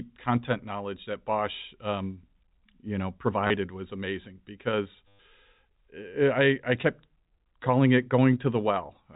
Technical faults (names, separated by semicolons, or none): packet loss with last packet repeated